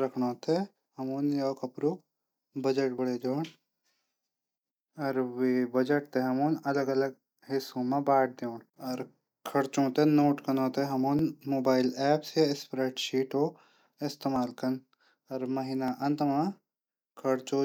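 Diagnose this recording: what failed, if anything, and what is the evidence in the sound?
Dropped buffers (overrun) at 2.98, 4.68, 11.19, 14.36 and 15.88 s, at the driver or buffer stage. Each is a jump where the speech skips ahead by roughly 10 ms with no silence, likely because the capture software missed its deadline and the hardware overwrote unread samples.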